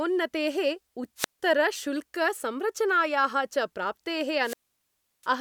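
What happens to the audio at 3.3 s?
Nothing goes wrong at 3.3 s; the speech plays through that moment intact, with no dropout, click or distortion.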